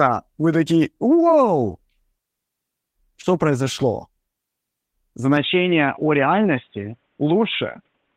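At 3.21 to 3.25 s there is a short concealed packet loss: about 20 ms of audio failed to arrive in time, and the decoder bridged the gap by extending the preceding sound before crossfading back, leaving a brief smear in the speech.

From 5.37 s to the end, the speech abruptly loses everything above 3.8 kHz and turns dull and boxy, with no gap at the transition and little level change. The likely cause is the input switching to a poorer device, which adds a faint noise floor far below the speech.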